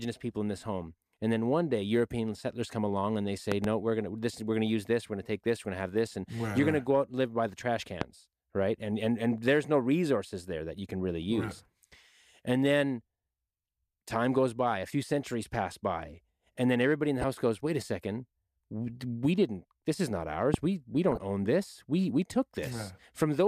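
A speech recording interrupted by sharp, thumping loud pops that sit well above the voice, about 20 dB louder, while the speech continues underneath: a close double pop at 3.52–3.67 s, then single pops at 8.01–8.04 s and 20.54–20.56 s, likely caused by electrical steps from a plug, switch or static discharge. Two brief bursts of DAB burbling, a few watery blips laid over the speech, occur at 17.21–17.24 s and 21.11–21.18 s. Weak reception let bit errors slip past error correction into the MP2 data, putting short blips of noise in single sub-bands. The short bursts fit a handful of corrupted frames at a low error rate.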